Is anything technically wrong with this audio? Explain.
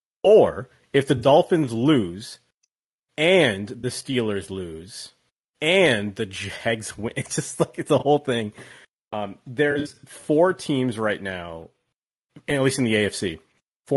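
Yes. The speech has a rough, grainy texture throughout, with a hiss-like fill between the harmonics and a top band that sounds thin and synthetic. This is likely low-delay AAC compression (AAC-ELD) at a bitrate around 32 kbps. Its very short frames resolve pitch harmonics poorly and leave too few bits, so a spectrogram shows smeared harmonic stripes, speckled noise between them, and a flattened, patchy upper band.

There are also four AAC frame losses with concealment, where the decoder patched gaps by reusing the last good spectrum. The first comes right after "or if the" at 1.17–1.27 s and lasts 60 ms. The second is at 3.79–3.85 s and lasts 40 ms. The third is a 20 ms loss at 7.99–8.03 s after "just like it's a". The worst is at 9.71–10.04 s, just before "four teams right now", where 180 ms of loss is scattered over 320 ms and the longest run is about 70 ms. Each sounds like a brief smeared, phasey or noisy blur. 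On a spectrogram these show as blocky, frozen or noisy columns, and in the waveform as dips in envelope detail.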